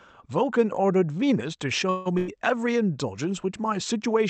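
At 1.89 s the speech stalls until 2.08 s: the last sound is stretched into a fading buzz or hiss for about 160 ms, then continues exactly where it stopped. This is a call audio freeze, likely caused by packets held up in transit draining the jitter buffer, so the gap is inserted and nothing is lost.

Shortly after, from 2.18 to 2.30 s, a burst of packet loss removes about 100 ms of speech. The receiver fills the hole by continuing and fading the preceding sound for roughly the same length, then resumes further along, leaving an audible skip. The Opus call path limits the audio to about 8 kHz.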